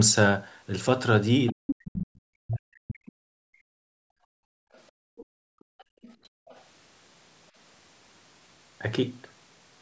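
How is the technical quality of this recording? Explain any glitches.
The recording has clear echo-canceller trouble: the far end leaks through, the talker is pushed down during double talk, and the room sound is gated later on. The audio tops out at 8 kHz, consistent with call-style microphone processing.

Other side's voice leaking through, from 1.46 to 1.75 s, then at 4.73 to 4.81 s, 5.17 to 5.25 s, 5.6 to 6.16 s and 6.47 to 6.61 s. A second voice sits under the talker, most likely loudspeaker playback that the echo canceller failed to subtract from the microphone. The first scrap is strong, only about 5 dB below the speech. The later ones are faint, around 25 to 35 dB down, and come through as brief fragments.

Speech suppressed in double talk, from 1.5 to 3.63 s. Both ends were talking at once, and the canceller, likely unable to tell the local voice from the echo, turned everything down. 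For roughly two seconds in total the talker's voice sinks, at worst by around 40 dB, until the overlap clears.

Background gated by the echo canceller, from 3.91 to 6.47 s. While the far end was playing, the canceller clamped the microphone hard, and the room tone drops by up to about 33 dB. Over roughly two seconds of this span the ambience dips. It then returns once the suppression releases.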